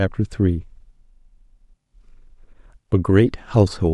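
Nothing in this speech recording stands out as a technical fault, so there's nothing to point to at any moment along the way.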